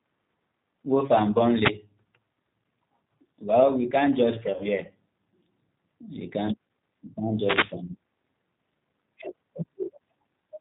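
The whole clip carries G.729 codec damage, consistent with 8 kbit/s VoIP. Speech is band-limited below 4 kHz and sounds rough and synthetic. At 1.63 to 1.70 s a wireless microphone noise hit occurs. An FM radio fade lets receiver noise swish through briefly. After "we can't judge", at 4.54 to 4.67 s, VoIP packet loss is concealed by the speech codec. About 60 ms of audio went missing. The decoder stretches the last sound into a buzzy tone or coloured noise that fades, and the sound stays weak afterwards. After "can't you can't", at 7.37 to 7.77 s, a longer wireless microphone noise hit brings a burst of static.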